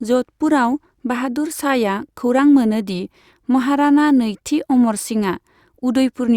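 No technical faults can be heard anywhere in the recording; the signal holds steady and continuous from its first moment to its last.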